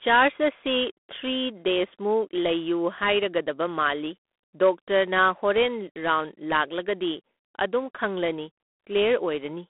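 The speech has passed through G.726 ADPCM coding at a low rate, which fits 24 kbit/s, for the whole clip. Each sample carries only a few bits describing its difference from a predicted value, so quantisation error is large and rides on the signal. That shows up as a harsh, rasping hiss that swells and fades with the speech level. The line band runs from 250 Hz to 3.5 kHz, and nothing remains above 3.8 kHz.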